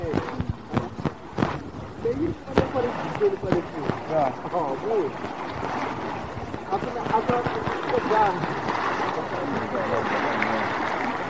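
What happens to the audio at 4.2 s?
Nothing goes wrong at 4.2 s; the audio plays through that moment intact, with no dropout, click or other fault.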